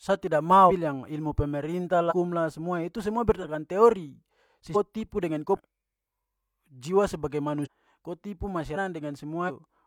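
Compressed frames are skipped at 0.66, 2.07, 3.39, 4.72, 5.53, 7.62, 8.73 and 9.45 s. Whole 42.7 ms frames never play, so the speech jumps ahead by a fraction of a second up to about one second.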